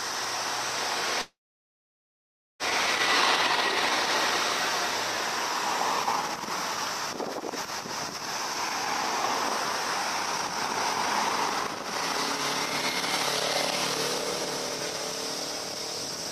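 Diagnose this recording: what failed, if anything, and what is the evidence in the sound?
A call audio freeze runs from 1.21 s to 2.63 s: the sound turns into a brief fading buzz or hiss, then about 1.25 s of silence, before resuming where it stopped with nothing lost. This likely reflects network packets stalling and the jitter buffer draining, adding about 1.38 s of delay.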